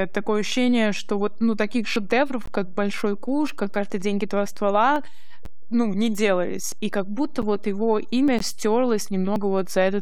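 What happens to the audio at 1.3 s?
A DC offset shifts the entire waveform off zero for the whole clip, including 1.3 s; it isn't audible directly but costs headroom and adds steady sub-bass energy.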